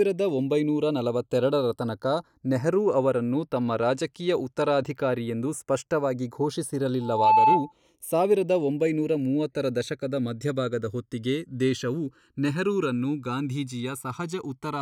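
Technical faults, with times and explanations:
Throughout, channels drifting apart: the two channels run on slightly mismatched clocks, roughly 100 ppm apart, so their offset creeps to about 1 ms by the end. Summed to mono, comb notches sweep slowly, heard as slow flanging, seen as drifting diagonal notch bands on a spectrogram.
7.01–7.72 s, loudspeaker feedback squeal: a microphone-to-loudspeaker loop exceeds unity gain at 870 Hz, so that tone swells over roughly 0.3 s to about 10 dB above the speech, ending just before "ಸಾವಿರದ ಒಂಬೈನೂರ ಮೂವತ್ತರ ದಶಕದ". A spectrogram shows one bright horizontal line; the waveform bulges.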